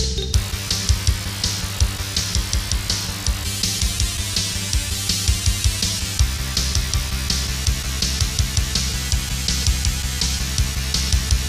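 No technical faults can be heard anywhere in the clip. Nothing in the audio points to anything having gone wrong between capture and playback.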